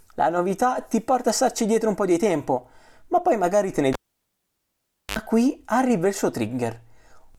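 Cable pulled and plugged in, from 3.93 to 5.19 s: a live lead is yanked out and reinserted. A pop opens roughly 1.21 s of near silence, then a 74 ms burst of 50 Hz mains buzz as the plug tip makes partial contact, and a second pop as the speech returns.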